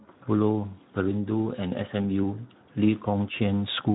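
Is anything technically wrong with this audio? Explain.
Yes. Throughout the speech, the voice sounds hoarse and grainy, with a buzzy roughness, and the audio is band-limited, with nothing above about 3.9 kHz. This is Speex codec damage. Speex is a CELP codec that models the vocal tract with a filter and spends its limited bits on the excitation signal that drives it. Here the damage points to a bitrate around 11 kbps in narrowband mode, too few bits to capture that excitation faithfully, leaving a coarse, noisy texture.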